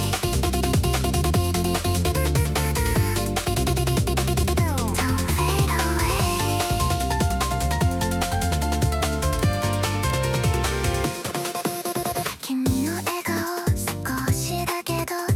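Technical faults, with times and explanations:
No technical faults are audible.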